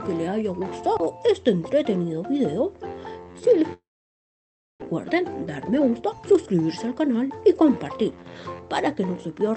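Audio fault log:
3.73–4.84 s, long network dropout: The sound stops arriving here. The last bit of sound is stretched into a buzzy tail that fades, then silence holds for nearly a second. When the audio returns, a stretch of about 0.6 s is simply gone. The likely cause is a network outage, where the receiver invents sound to cover the gap and then gives up. Afterwards the audio sits about half a second later than before.
4.94–8.35 s, jitter buffer speed-up: Right after the gap the audio runs at about 113% speed. The pitch stays the same, so it sounds hurried rather than higher. The delayed audio arrived in a burst, and the receiver held more than it wanted. To catch up, it cut many tiny slices, each one or a few pitch cycles long, until roughly half a second was removed. The top end stops near 8 kHz throughout, which fits an Opus call codec at a modest bitrate.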